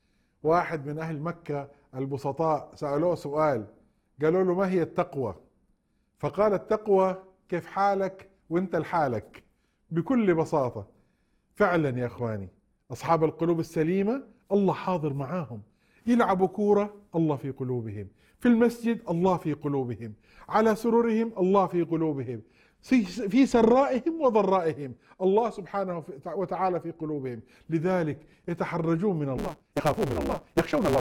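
From 29.37 s to the end, a block size mismatch (truncated) cuts the tail off each written block, consistent with 512-sample blocks. This adds a 150 Hz buzz and runs the audio 1.6 times fast at near-normal pitch, whereas a resampling speed-up would raise the pitch.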